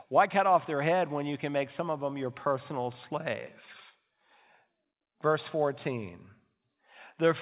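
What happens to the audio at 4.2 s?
Nothing goes wrong at 4.2 s: the speech carries on intact through the call path, with the narrow telephone-band sound of the G.711 mu-law codec, which leaves nothing above 4 kHz.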